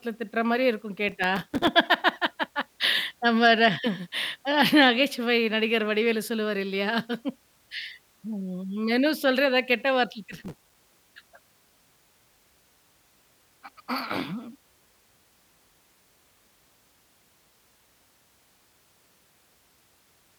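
Processor overload crackle in this speech clip from 1.09 to 1.68 s and 10.32 to 10.74 s: missed buffers of roughly 3 ms drop out as runs of silent gaps.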